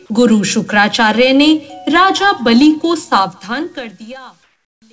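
Truncation distortion on the fade runs from 3.16 s to 4.92 s, as the fade-out that begins around 3 s drops toward silence. The fade stage keeps only about 11 bits and adds no dither, so as the level falls the waveform gets rounded onto a few coarse steps. The tail turns grainy and rough, and it is at its worst from 4.47 s.

Comfort noise replaces the background from 4.44 s to 4.82 s, a stretch of 380 ms. The quiet background, about 46 dB below the loud parts, gives way to a flat, even hiss with none of its earlier texture, about 7 dB lower. The likely cause is discontinuous transmission: once the sender judged there was no active signal, it stopped sending audio, and the receiver filled the gap with synthetic noise.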